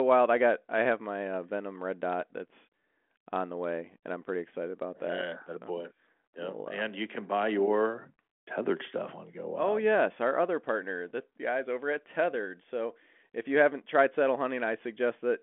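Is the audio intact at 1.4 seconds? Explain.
Yes, the audio is intact at 1.4 seconds, with no fault at that moment.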